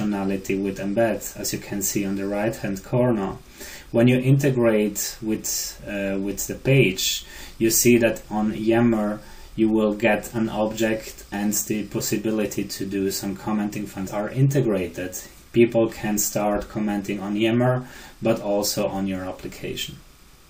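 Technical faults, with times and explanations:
Throughout: timecode bleed. A faint, steady chirping warble sits behind the sound the whole way through, roughly 40 dB below it, flickering between two pitches around 1 kHz and 2 kHz. That is linear timecode leaking in from a nearby track or cable. Its square-wave code flips between a lower and a doubled frequency to encode bits, and its frames repeat 29.97 times a second, which gives the chatter its fast, regular rhythm.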